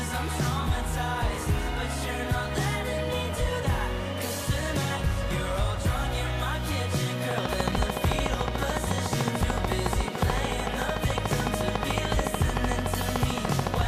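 A train of clicks runs from 7.31 s to 13.82 s, about a hundred evenly spaced pops at 13.7 per second, well above the audio, likely from electrical interference.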